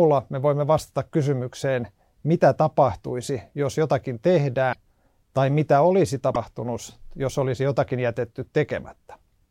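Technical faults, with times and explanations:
4.72–4.76 s and 6.34–6.36 s, broken MP3 bit reservoir: the sound skips ahead abruptly, and the first frames after the cut decode wrongly, roughly 40 ms the first time and 26 ms the second, close to one 26.1 ms MP3 frame. The likely cause is frames cut out of the stream, so the next frame reaches back into the reservoir for its borrowed bits, finds bytes from another frame, and decodes them wrongly.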